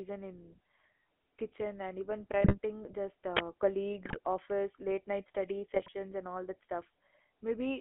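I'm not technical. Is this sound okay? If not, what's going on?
No, it has three problems. GSM full-rate codec, throughout: an old mobile-phone speech compressor rebuilds the voice from a rough model, leaving it buzzy, gravelly and cut off above 3.4 kHz. GSM bit errors at 2.44–2.56 s (after "kitchen and even"), 4.04–4.19 s, and 5.74–5.89 s (after "night study", before "and all"): corrupted data made the decoder squawk, pop and gargle. Uninitialised buffer at 3.37–3.39 s: leftover memory played as sound, giving a sudden, loud burst of digital noise.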